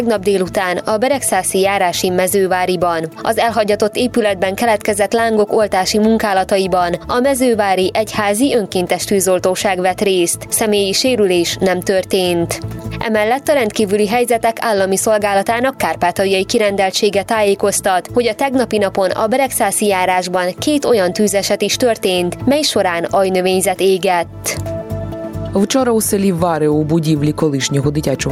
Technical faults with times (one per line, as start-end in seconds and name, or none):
0.00-28.32 gain pumping